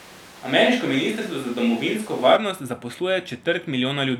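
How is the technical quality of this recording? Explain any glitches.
The recording has one clear problem at the start. From the opening to 2.35 s the speech sounds roomy, hollow and thin, with noise roughly 25 dB below it, at about the same level. This is likely a switch to a distant microphone. The abrupt return to close, full sound at 2.35 s distinguishes it from gradual reverb or EQ changes.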